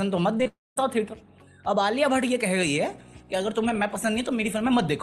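Short concealed packet loss hits this call audio twice, at 0.37 to 0.41 s and again at 0.43 to 0.47 s, each time with about 20 ms missing. The receiver bridges each gap by extending the preceding sound and then crossfading back into the real signal, so each one comes across as a brief smear or wobble rather than a clean hole.

Long network dropout follows straight on, from 0.47 to 0.78 s. About 0.3 s of audio is gone, most likely because nothing arrived over the network for that stretch. The concealment keeps extrapolating the last sound as a fading buzz or hiss, which decays into roughly 0.2 s of silence. The audio then resumes further on, with the lost portion simply skipped. The Opus-style call path caps the bandwidth at 12 kHz.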